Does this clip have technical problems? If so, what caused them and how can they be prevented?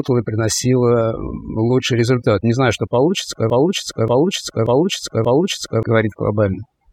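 Yes. Overdone noise removal runs throughout the speech: an overly aggressive noise reduction setting suppresses whole frequency bands near its noise estimate, leaving a lowered background that breaks up into twinkling specks. Unlike a simple noise gate, the damage is spectral. Using a gentler reduction amount prevents it.

A broken-record loop follows "знаю что получится" from 3.50 to 5.83 s. A 0.58 s fragment repeats exactly four times, likely from a stalled player or stream resending its last buffer, and the intervening audio is lost. Unlike an echo, each repeat is identical and undecayed. Adequate buffering and stall detection would prevent it.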